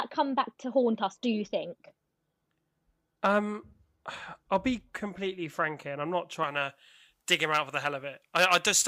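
From 6.44 s, right after "here and I'm not", to the end at 8.87 s, pre-emphasis is left on. The treble boost was never undone by its matching de-emphasis, which fits a J.17 curve. At 10 kHz the treble sits about 11 dB above 1 kHz. The speech turns thin, bright and sibilant.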